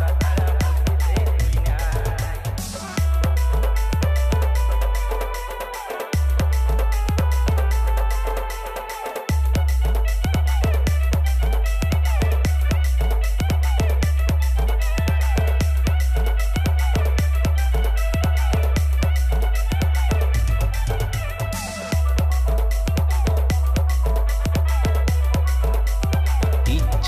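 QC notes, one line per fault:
No technical faults are present, and the signal stays continuous across the whole clip.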